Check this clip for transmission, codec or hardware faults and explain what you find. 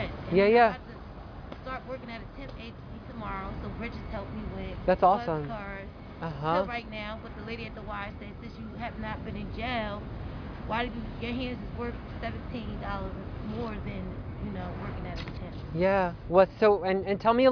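Close listening turns up no technical faults: the signal stays continuous and stable throughout, with nothing that interrupts or disturbs it.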